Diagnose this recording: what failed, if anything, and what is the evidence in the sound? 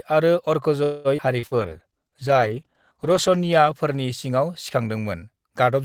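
Network stage, call audio freeze: packets were likely held up in transit, and the jitter buffer ran dry from 0.83 to 1.08 s. The receiver extended the last sound for about 0.21 s as a fading buzz or hiss, with no silence, then resumed exactly where the speech stopped. Nothing is lost; a gap has been inserted.

Jitter buffer, skip ahead: at 1.17–1.21 s a stretch of audio was dropped while later audio was already queued. Roughly a tenth of a second of speech is missing, and the two sides are joined almost directly with a very short bridge.

Jitter buffer slow-down: from 1.33 to 2.54 s the buffer was rebuilding its reserve by repeating single pitch periods and bits of pauses. Speech plays at about 93% speed with the same pitch. It sounds drawn out, and about 88 ms is added over that stretch.

Network, short concealed packet loss: about 40 ms of packets never reached the decoder at 1.39–1.46 s and again at 1.47–1.54 s. 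Each time the receiver continued the previous sound for roughly 40 ms and blended back, leaving two quick smears or wobbles in a row.

Codec stage, call bitrate drop: the bandwidth estimate fell at 1.42 s, and the Opus encoder went from 32 to 13 kbps. It stayed at its lowest for about 1.8 s. Speech turns coarse, watery and muffled as the highs are cut, and it clears by 4.66 s.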